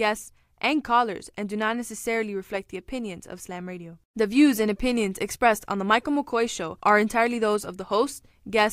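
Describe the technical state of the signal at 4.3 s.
At 4.3 s the speech signal is intact, with no audible technical fault at that moment.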